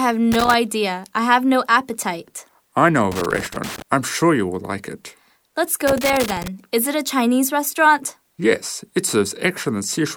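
Loose connector crackle breaks into the audio three times, at 0.32 to 0.54 s, 3.12 to 3.82 s and 5.87 to 6.48 s, each an irregular burst of scratchy crackle lasting between about a fifth of a second and 0.7 s. A worn or dirty contact somewhere in the signal path is making and breaking as it shifts, chopping the signal on and off many times in quick succession, so the sound stutters and scrapes instead of passing cleanly.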